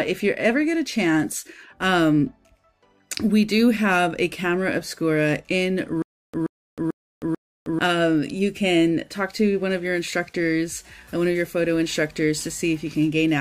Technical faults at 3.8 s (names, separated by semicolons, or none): none